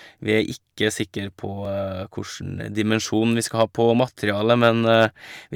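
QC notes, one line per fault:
1.65 s, repeated buffer: a very short slice of the speech, about 1.5 ms long, plays twice in a row, which fits a 64-sample buffer being sent to the output again because fresh audio was late. Each copy meets the next with a hard edge, so the waveform jumps. With so tiny a slice, the ear hears one brief click rather than a stutter. No speech seems to go missing; the repeat only adds a sliver.
3.61–3.91 s and 4.29–5.05 s, hard clipping: the speech peaks exceed what a stage in the chain can pass and are cut off flat, by about 2 dB in the first run and about 4 dB in the second. Those squared-off tops create new harmonics high in the spectrum. The first run sounds like crackle on the loudest moments. The deeper overload in the second gives a harsher, more constant grit across its louder syllables.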